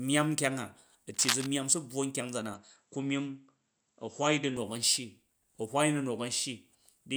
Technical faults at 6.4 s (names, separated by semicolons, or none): none